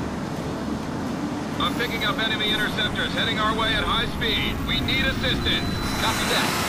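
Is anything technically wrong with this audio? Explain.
No, nothing technically wrong stood out on listening to this audio.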